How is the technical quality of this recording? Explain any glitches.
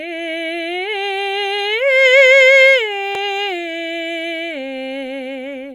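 The recording has one audible glitch, a brief burst of damaged data in a compressed stream at about 3.15 s in the music. Some of the encoded bytes at that point were corrupted, so the decoder could not interpret the affected frame correctly, lost its place in the bitstream and had to resynchronise on the next valid frame header. The result is a very short blip lasting only a few milliseconds that cuts abruptly across the music before normal playback resumes.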